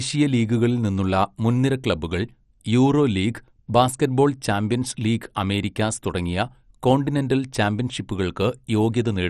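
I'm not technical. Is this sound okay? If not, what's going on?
No. Throughout, the speech sounds dull and gurgly, with nothing above 14.2 kHz, likely from heavy MP2 compression that dropped the upper bands and coarsened the rest.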